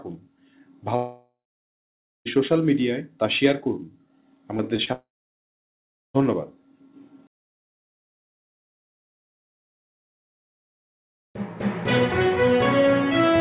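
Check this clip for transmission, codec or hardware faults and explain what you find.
There are two clear problems: a pair of long gaps and a short cluster of tiny glitches just before the second gap. All of it sits on a narrowband call path with nothing above 4 kHz, which fits G.711 mu-law at 64 kbps.

Long network dropout, at 0.96 to 2.27 s and 4.93 to 6.16 s: the sound stops, the receiver stretches the last bit into a fading buzz, and then there's roughly a second of dead air, about 0.9 s the first time and about 1.1 s the second. This is likely a network outage where about 1.2 to 1.3 s of audio never arrived. When the audio comes back it simply skips ahead, so whatever was lost is gone for good.

Short concealed packet loss, at 4.57 to 4.60 s, 4.76 to 4.80 s and 4.84 to 4.89 s: each time a 20 ms packet went missing, and the decoder filled the hole by continuing the previous sound before blending back into the real audio. 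You hear these as quick smears or wobbles bunched together, right before the second dropout.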